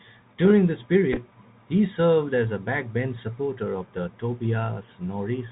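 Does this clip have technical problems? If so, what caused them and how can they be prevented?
Yes. Bluetooth CVSD headset codec damage runs through the whole speech clip. The band stops flat at 4 kHz, s sounds turn scratchy, and a granular hiss sits under everything. This fits a 64 kbps one-bit delta link whose adapting step can't keep up with loud high sounds. A spectrogram shows a hard ceiling at 4 kHz over grainy broadband noise. To prevent it, record through a wideband (mSBC or LC3) headset mode or a wired microphone.

A Bluetooth headset packet repeated fault hits from 1.13 to 1.17 s. About 22.5 ms of audio was lost over a 37.5 ms stretch, with the longest run around 10 ms, and the chip replayed the last good packet's bits. A run of repeats every 3.75 ms gives a brief rough buzz near 267 Hz. The waveform shows short identical repeating cycles, and the spectrogram shows harmonic striping there. 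To prevent it, keep the headset close to the phone and away from 2.4 GHz interference.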